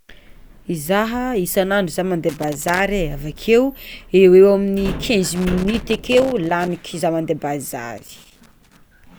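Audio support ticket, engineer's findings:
Loose connector crackle on the speech, three bursts: 2.29–2.80 s, 5.35–6.85 s, 7.98–8.77 s. Irregular scratchy crackle, longest run about 1.5 s. Probably a worn or dirty connector making and breaking as it moves, chopping the signal. Reseat or swap the cable.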